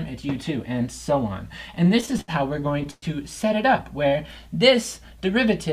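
From 1.75 to 3.04 s the sound catches and drags in a string of brief holds, the longest about 115 ms, with roughly a quarter of that stretch filled in. This is repeated stalls (stutter): late packets kept emptying the jitter buffer, so the receiver extended the last sound each time, adding about 308 ms without losing any audio.

Between 4.09 and 5.31 s the audio turns drawn out and slightly slow, running at about 94% speed while the pitch stays unchanged. This is a jitter buffer slow-down: to rebuild its reserve, the receiver repeated short pitch periods and pause fragments, adding about 77 ms.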